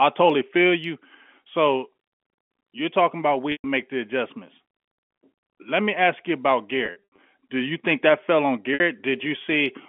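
Packet loss with pitch repetition at 3.52–3.64 s, 6.86–7.18 s (scattered) and 8.74–8.80 s: the last pitch period is looped across each gap, giving brief buzzy, held tones before fading.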